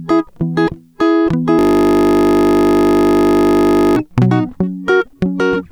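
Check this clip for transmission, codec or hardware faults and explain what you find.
The music has one fault. System hang loop from 1.59 to 3.96 s: the computer or driver froze while the audio hardware kept replaying the same 20 ms stretch of its ring buffer, about 120 times. Because the loop is so short, the music gives way to a steady buzz at 50 Hz.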